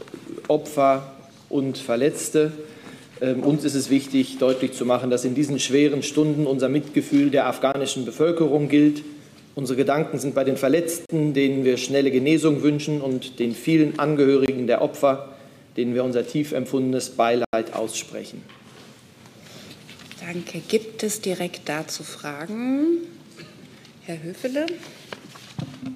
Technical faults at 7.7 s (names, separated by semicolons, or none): block of digital silence